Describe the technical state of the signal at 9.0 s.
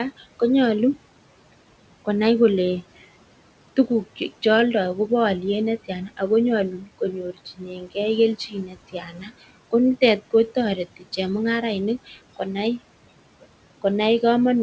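At 9.0 s the noise suppressor mistakes part of the speech for background and turns it down with the noise. This speech cut by the noise suppressor runs from 8.93 to 9.3 s, just before "ko nitet", and gain falls by about 9 dB at its deepest over roughly a third of a second. The affected stretch sounds swallowed and faint, as if the talker briefly drew back from the microphone, before full level returns on the following words.

Underneath, the noise suppressor artifacts present throughout the clip are also active here. The processor pulls the bands it reads as steady noise down by about 18 dB, frame by frame, so the room noise (about 19 dB below the speech) dips and swells with the speech. Nothing above 8 kHz comes through the G.722 call path.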